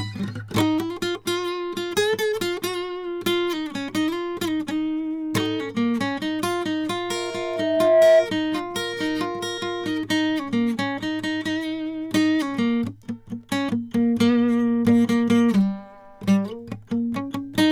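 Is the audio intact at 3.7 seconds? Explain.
Yes, the music plays through cleanly at 3.7 seconds, with no dropout, click or other fault at that moment.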